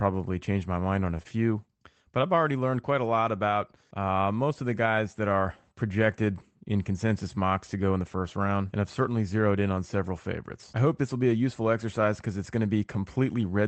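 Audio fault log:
1.23–1.27 s, short concealed packet loss: right after "my mind on a", a brief smear where about 20 ms of audio never arrived in time; the receiver stretched the preceding sound to cover the gap, then blended back into the real signal, leaving a wobble.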